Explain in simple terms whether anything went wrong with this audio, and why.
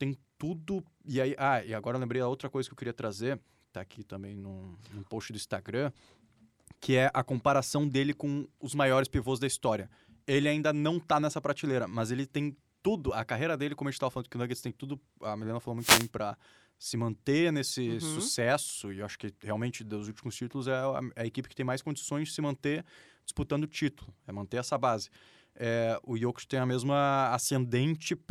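At 15.78 s the radio link of the wireless microphone briefly faded as reflected signals cancelled each other. The receiver's own noise rose to fill the gap, so for about a third of a second, until 16.10 s, a swish of static is heard over the speech: a wireless microphone noise hit.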